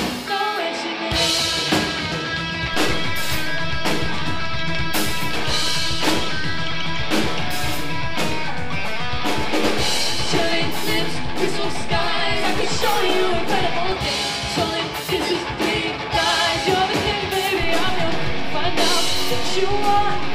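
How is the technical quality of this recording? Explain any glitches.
The recording has two DC steps. At 2.74 s the zero line jumps by about -20 dBFS and holds until 13.92 s, then at 17.63 s it jumps by about -18 dBFS through to the end. Each shift is heard as a low thump while the sound continues unchanged.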